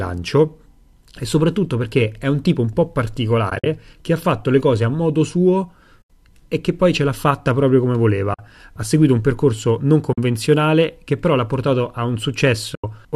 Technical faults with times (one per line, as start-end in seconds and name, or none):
3.50-3.66 AAC frame loss with muting
6.01-6.10 AAC frame loss with muting
8.34-8.39 AAC frame loss with muting
10.13-10.18 AAC frame loss with muting
12.75-12.84 AAC frame loss with muting